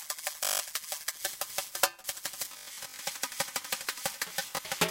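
Bluetooth stutter hits at 0.44–0.60 s, 2.45–2.98 s and 4.46–4.71 s. Packets arrived late or went missing, so the receiver looped roughly 20 ms slices into a machine-gun buzz, then jumped ahead. About 160, 280 and 100 ms of sound are lost.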